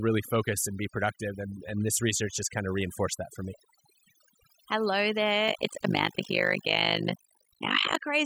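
Overdone noise removal runs through the whole of this speech recording. A noise reduction stage set far too aggressively has cut individual frequency bands down or out wherever they sat near its noise estimate, leaving near-silent gaps sprinkled with twinkling specks. Overlap-add ripple appears from 5.48 to 8.02 s. The audio was split into windowed frames and rejoined with an overlap that doesn't sum to constant gain, so the level swings by about 60 dB once per frame, around 50 times a second.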